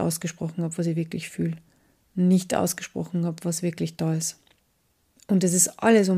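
Listening through this speech recording, nothing stood out as a technical fault at any point.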